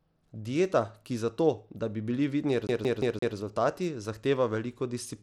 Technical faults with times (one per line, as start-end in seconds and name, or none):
0.00-5.23 Bluetooth SBC compression
2.67-3.36 CD stuck on one turn